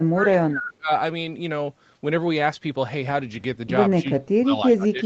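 From the start to 0.91 s, and again from 4.02 s to the end, the speech dips, by as much as about 30 dB. This is speech suppressed in double talk, likely because the echo canceller mistook the talker for loudspeaker echo while both sides spoke, and turned it down.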